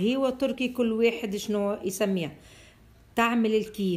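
No technical faults are audible.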